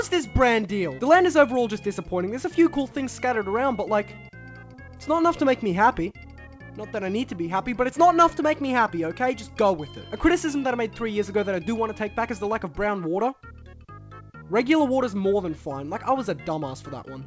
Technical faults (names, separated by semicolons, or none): none